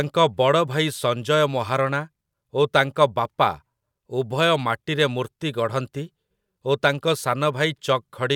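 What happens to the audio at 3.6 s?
Nothing goes wrong at 3.6 s; the speech carries on intact through that moment, with no dropout, click, distortion or other fault to be heard.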